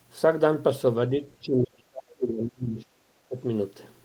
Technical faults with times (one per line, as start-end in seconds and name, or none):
1.42-3.37 speech suppressed in double talk